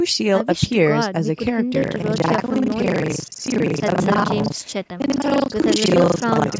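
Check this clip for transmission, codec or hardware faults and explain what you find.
One fault is present, a hardware-side buffer problem. Buffer tearing runs from 1.8 s to the end of the clip. The writing program and the playback hardware have slipped and cross inside each period, so roughly half of every buffer replays audio about 70 ms old. The hard joins on both sides produce a steady robotic buzz at 25 Hz, which fits a period of about 40 ms, and it is heard only while sound is present. The call microphone processing is working normally, with nothing above 8 kHz.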